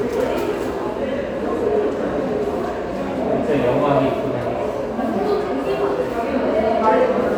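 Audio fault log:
No faults can be heard anywhere in this recording of sounds. Nothing in it calls for an entry in the log.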